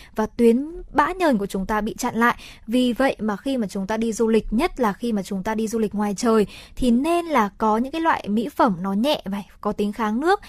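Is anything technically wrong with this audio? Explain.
Yes. From 2.88 to 8.88 s, after "ta bị chặn lại" and until "nhẹ và", an adaptive stream at a lower bitrate takes over. The speech turns more smeared, which points to a step from about 64 to 32 kbit/s Opus. On a spectrogram the upper band abruptly thins and turns patchy, with no gap in the waveform.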